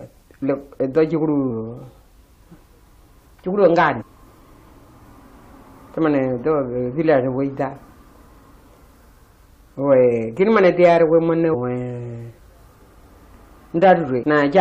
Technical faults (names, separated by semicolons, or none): damaged data in a compressed stream